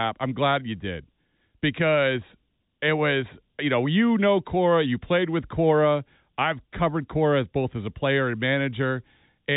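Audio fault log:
No faults heard.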